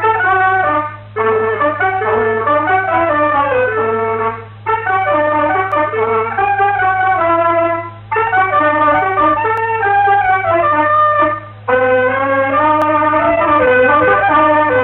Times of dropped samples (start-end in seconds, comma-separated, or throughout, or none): 5.72, 9.57, 12.82